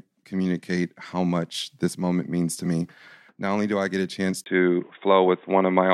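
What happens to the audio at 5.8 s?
At 5.8 s the input has likely switched to a poorer device, from 4.44 s to the end. After "I get a chance" comes a 20 ms gap, then dull, boxy speech: the spectrogram empties above 3.8 kHz, a faint new noise floor appears, and the waveform steps in level.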